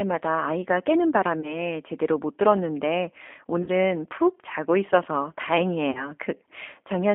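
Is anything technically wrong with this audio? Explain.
Yes, two faults are audible.

G.729 codec, throughout: the speech is rebuilt from a vocal tract filter, a pitch predictor and a few pulses per frame, consistent with an 8 kbit/s stream. The line passes only 250 Hz to 3.4 kHz, so the sound is thin, rough and plainly synthetic.

VoIP packet loss concealed by the speech codec, at 1.41–1.59 s, 3.63–3.69 s and 5.91–6.12 s: 20, 40 and 40 ms of audio were lost, pointing to one, two and two packets. The decoder extended its last pitch and filter at falling gain, leaving a fading buzzy or noisy smear and weakened sound until it recovers.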